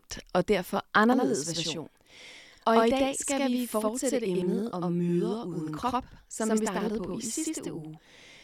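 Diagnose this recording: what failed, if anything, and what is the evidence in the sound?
From 1.12 s to the end, the speech is doubled by a distinct slap echo about 93 ms behind, at equal level. This is a channel delay (doubling) at the driver or buffer stage. One channel runs late, which fits a 4096-sample buffer, and the mono sum exposes the copy.

At 4.42 s there is a brief, tiny skip. This is an overlap between stream segments, at the network or playback stage. Overlapping timestamps at a segment boundary, which fits 4-second segments, made the player discard a few milliseconds of sound, so the waveform jumps.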